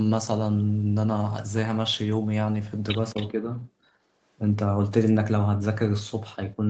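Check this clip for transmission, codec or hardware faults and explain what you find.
Two faults are audible, both clustered where the two ends of the call seem to be talking at once. The speech is band-limited to 8 kHz, which fits a wideband call codec.

Speech suppressed in double talk occurs at 3.13–3.47 s, 3.67–3.71 s and 6.56–6.61 s. The level dips briefly, by about 5 dB at the first and last events and by about 10 dB at the short middle one. The likely cause is the echo canceller failing to separate the talker from the far-end echo and turning both down.

Echo leak occurs at 3.16–3.28 s. A faint copy of the speech, about 15 dB below it, trails the original by 239 ms. This is likely a loudspeaker endpoint whose echo canceller left part of its microphone pickup in place and sent it back.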